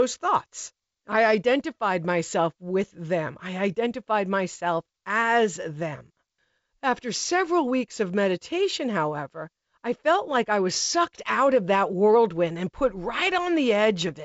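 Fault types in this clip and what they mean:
No faults in this clip.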